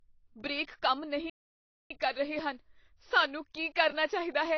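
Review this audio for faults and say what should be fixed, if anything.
The speech carries plainly audible codec damage from start to finish: it sounds dull and smeared, with a warbling, fizzy edge on sibilants. This is likely AAC compression, with AAC-LC quantising each frame's spectral lines against a hearing model, and the degree of damage points to a low bitrate of around 24 kbps. On a spectrogram you would see a lowered high-frequency cut-off, with bands either left as holes or filled with substitute noise. Encoding at a higher bitrate would prevent this.

A playback stall runs from 1.30 s to 1.91 s, right after "ਬ੍ਰੇਕ ਕੰਮ", and the audio resumes with "ਕਰ ਰਹੇ ਹਨ ਸਾਨੂੰ". The sound stops mid-flow for about 0.61 s. That fits a player that likely ran out of data, or whose audio thread was blocked, so its output went silent until it recovered. The waveform shows a flat gap of that length, and the spectrogram shows a blank vertical band across all frequencies. 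Larger playback buffers and keeping the audio thread unblocked would prevent it.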